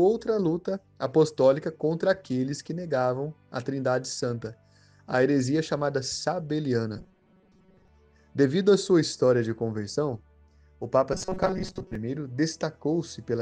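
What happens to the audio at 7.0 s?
At 6.98 s the sound turns into robotic sound from repeated short buffers, lasting until about 7.88 s. It gets a rigid, metallic buzz pinned at 188 Hz while still loosely tracking the shape of what's underneath. That pitch points to a chunk of roughly 5.3 ms being replayed over and over, most likely because fresh audio wasn't arriving fast enough, so the player looped the last bit and skipped most of the real material in that stretch.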